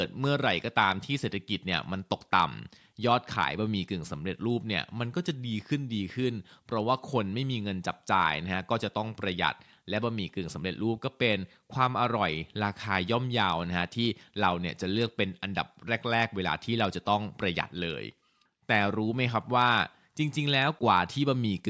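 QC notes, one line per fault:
No faults to log here; the speech has passed through a call microphone's usual processing, so the lowest bass is trimmed and nothing sits above 8 kHz, which is just how that path normally sounds.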